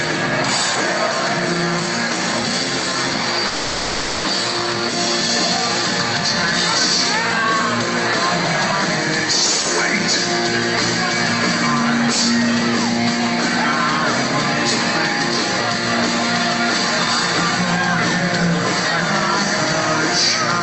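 From 3.47 s to 4.26 s there is a call audio freeze. The last sound is held and carried on as a buzzy, hissy continuation that fades but never drops to silence. About 0.77 s is filled this way. When the audio resumes it continues from where it stopped, with nothing skipped. Everything after is pushed back by roughly 0.77 s. The likely cause is packets held up in transit, letting the jitter buffer run empty.

From 7.43 s to the end of the clip there is a train of clicks, ticking steadily at about 9.8 per second with regular spacing. Each click has much the same shape, and the peaks sit around 5 dB above the program level, so they cut through both the sound and the pauses. Interference from nearby equipment or a faulty connection or power supply is the likely source. The call path's Opus coding, with its top end cut near 8 kHz, is audible underneath.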